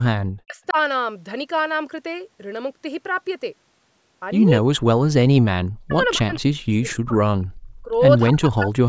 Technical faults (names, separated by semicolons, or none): speech suppressed in double talk; echo leak